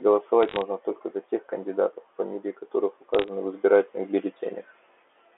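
Bit errors on a digital phone line crackle from 0.43 to 0.62 s and again from 3.14 to 3.28 s. A few bits per thousand flip on the telephone-band line, each corrupting one sample, and hits on high bits make sharp ticks. Unlike packet loss, the speech underneath never gaps or smears.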